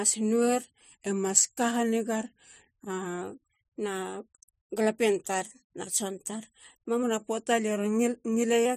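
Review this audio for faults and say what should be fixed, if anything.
From 1.06 to 3.22 s, and again from 7.03 to 8.66 s right after "tar na tson tar", the speech slows by 6.4% and drops 115 cents, a little over a semitone, then snaps straight back to normal. This is a drift correction step, likely from clock-matching software that changed the playback rate in a single jump to refill its buffer. Wow or tape-speed drift makes pitch waver and glide continuously, but here the shift holds at one fixed offset and has abrupt edges. To prevent it, have the clock-matching resampler adjust its rate in small, continuous increments rather than one large jump.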